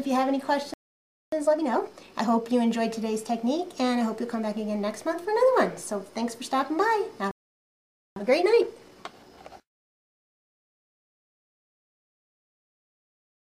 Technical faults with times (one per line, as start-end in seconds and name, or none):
0.74-1.32 playback stall
1.32-2.48 time-compressed catch-up
7.31-8.16 playback stall
8.16-11.16 time-compressed catch-up